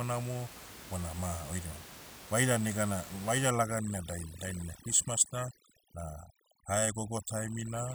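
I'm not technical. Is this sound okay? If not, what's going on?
No. From about 3.51 s to the end, the room noise behind the voice drops and breaks up into twinkling specks. That's overdone noise removal: a cleanup tool set too strong is cutting away quiet parts of the voice along with the background.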